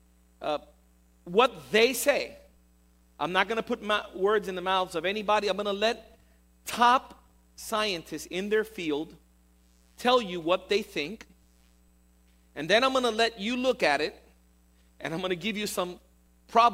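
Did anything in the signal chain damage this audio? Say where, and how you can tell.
No, nothing in the signal chain damaged this audio, and I can't point to any stage where a problem is audible.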